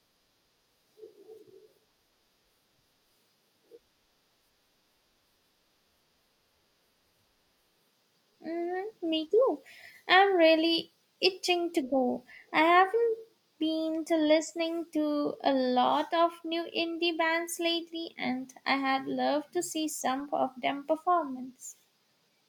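No technical faults can be heard anywhere in the recording. There is nothing in the speech to place on a timeline or explain.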